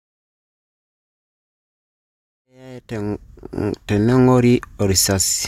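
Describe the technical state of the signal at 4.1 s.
At 4.1 s the signal is intact, with the speech at its full level and no audible fault.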